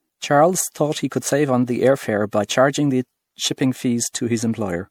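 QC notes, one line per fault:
Throughout, generation loss: the speech sounds swirly, smeared and hollow, with blurred consonant attacks and nothing above 19.9 kHz. It's worse than a single 96 kbit/s MP3 pass would give. It was likely re-encoded about five times, each pass adding fresh quantisation noise and spectral holes.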